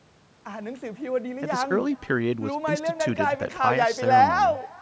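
Echo with no canceller, throughout: a far-end loudspeaker feeds the microphone back uncancelled, so the speech returns about 24 dB quieter, roughly 0.4 s later, and thin.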